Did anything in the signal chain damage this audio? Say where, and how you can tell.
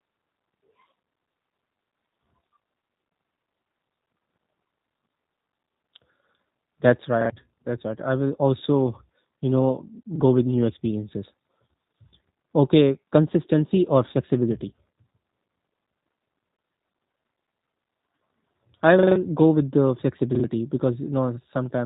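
Yes. The damage is at the codec stage, and it runs through the whole speech clip. This is G.729 codec damage, plainly audible. Nothing above 4 kHz survives. The voice sounds slightly rough and synthetic. That comes from rebuilding speech from a vocal tract model and sparse pulses, which fits an 8 kbit/s rate.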